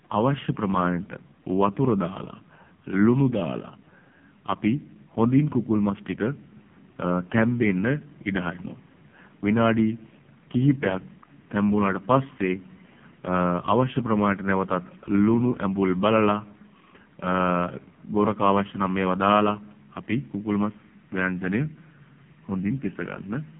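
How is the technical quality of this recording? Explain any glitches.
The recording has poor technical quality, with one fault running through the whole clip: AMR narrowband mobile codec damage. The heavy buzz fits one of the lowest AMR-NB modes, around 5 kbps. The speech is squeezed into a telephone band of about 150 Hz to 3.4 kHz, with nothing above 3.7 kHz. The codec rebuilds each 20 ms frame from a vocal-tract filter excited by a few sparse pulses, so with so few bits the speech comes out buzzy, thin and synthetic. On a spectrogram the energy stops at a hard ceiling near 3.7 kHz, leaving the upper band empty, and the low end falls away below 150 Hz. The waveform looks normal in level, but the harmonics appear smeared and grainy.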